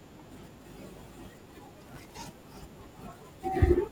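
Speech clip with processor overload crackle from 1.88 to 2.13 s: roughly thirty sub-millisecond buffers missed their deadlines, each repeating stale audio, producing gritty tearing.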